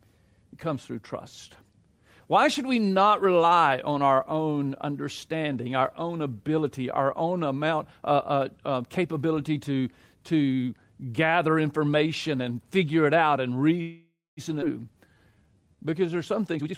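Speech with four timing faults near its end. Right after "figure it out and", from 13.81 to 14.4 s, the sound hangs as a fading continuation and then falls silent for its last 0.24 s before resuming with nothing lost. That is likely a call audio freeze, with delayed packets draining the jitter buffer. At 14.61 to 14.65 s the speech jumps forward, dropping about 0.4 s and splicing the edges almost directly, a skip ahead. From 14.93 to 16.17 s it drags at 85% speed with unchanged pitch, a jitter buffer slow-down in which repeated pitch periods add 190 ms to rebuild the buffer. From 16.55 to 16.75 s it rushes at 175% speed with unchanged pitch, a jitter buffer speed-up that cuts about 0.15 s of pitch periods to shed excess delay.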